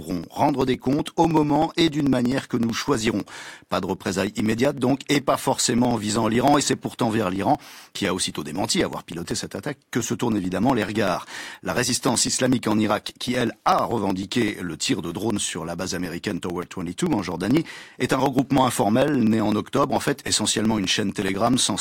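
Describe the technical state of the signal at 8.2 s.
At 8.2 s the signal is inside a run of periodic USB or driver dropouts lasting from 0.11 s to 21.72 s. Every 0.063 s something stalls the audio path and around a millisecond is skipped, giving a steady tick pattern over the speech.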